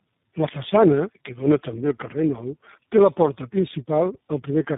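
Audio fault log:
Throughout, tandem speech coding: the speech passed through three low-rate speech coders in a row, GSM full rate, G.729A and iLBC, with G.711 links in between, so each coder re-encoded the previous one's degraded output. The result is rough, muffled and warbly, with nothing above 3.8 kHz.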